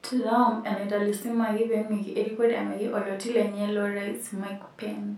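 No dropouts, clicks, distortion or other technical faults can be heard anywhere in this speech recording.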